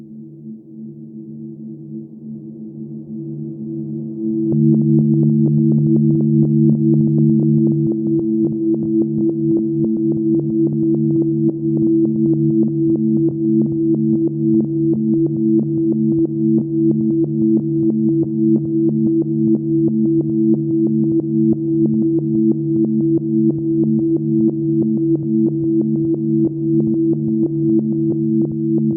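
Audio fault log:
Nothing to log here, as nothing in these sounds stands out as a technical fault.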